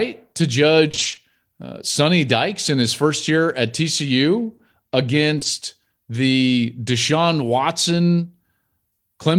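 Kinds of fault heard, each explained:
Repeated packet loss (robotic sound): from 0.87 to 1.19 s the speech turns choppy, with pieces dropping out. Eight gaps of up to 20 ms, half of that stretch, arrived late or not at all, and each was patched by extending the preceding sound before the next hole came.
Short concealed packet loss: a brief smear or wobble at 4.57 s, and another from 5.39 to 5.47 s where two holes fall back to back. Each 20 ms piece missed the decoder, so the receiver continued the last sound, then blended back into the real audio.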